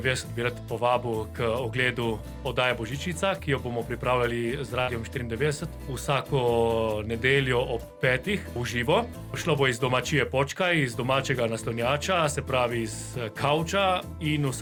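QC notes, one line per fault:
4.81–4.90 s, burst of packet loss: about 60 ms lost, last sound extended and faded for 62 ms; spectrogram shows a smeared, decaying band, then an abrupt resumption.
9.42–9.45 s, short concealed packet loss: 20 ms lost, bridged with 18 ms of extrapolated sound, heard as a brief smear; waveform shows a blurred, slightly mismatched sliver.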